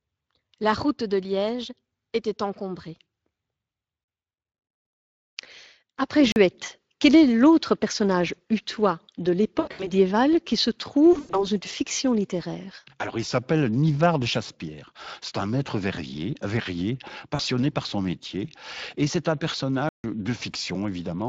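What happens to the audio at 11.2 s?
Around 11.2 s the speech hits VoIP packet loss concealed by the speech codec, from 11.13 to 11.47 s. About 140 ms of audio went missing, scattered over 200 ms, with the longest gap 100 ms. The decoder kept repeating its last pitch and filter at falling gain, so the voice smears into a fading buzzy tone or coloured noise. A plain dropout would instead cut to silence, and here the sound stays weak for a while after the gap.

Underneath runs the Speex codec, plainly audible across the clip and consistent with a setting near 20 kbps. It gives a steady layer of codec damage. That damage is constant, unlike the short, fading smear of the concealment.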